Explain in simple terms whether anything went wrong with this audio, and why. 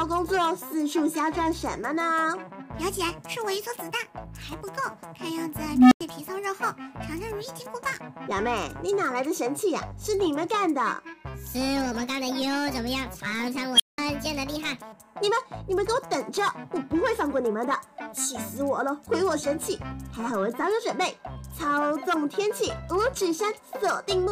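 An unstable filter fails at 5.69–6.01 s and 13.75–13.98 s. A faulty feedback loop makes a tone grow until it overloads. First a low beep around 300 Hz swells for about a quarter-second; later a high squeal around 3 kHz builds in 44 ms. Each time the sound then cuts out briefly, for 93 ms and then 186 ms, while the filter resets.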